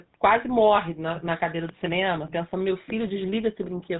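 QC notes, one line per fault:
throughout: GSM full-rate codec. The speech has a plainly audible buzzy, gravelly roughness because the codec models the vocal tract and excites it with a coarse, regularly spaced pulse train that keeps only every third excitation sample. The fine detail of the voice source is replaced by that grid. The band stops at 4 kHz, which fits the 13 kbps full-rate mode.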